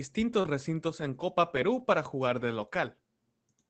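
At 0.41 s a short concealed packet loss begins: roughly 20 ms of audio arrived too late for the decoder, which bridged the hole by extending the preceding sound and then cross-fading back, so the passage smears briefly. Unlike a dropout, there is no silence, only this guessed continuation.

From 0.44 to 0.46 s, overlapping that repair, a lost packet rebuilt from error correction takes over. About 20 ms comes from the coarse backup copy carried in the next packet, so the sound is genuine but grainier and noisier rather than invented. The surrounding Opus coding, which fits a bitrate near 24 kbps, has a top limit near 8 kHz.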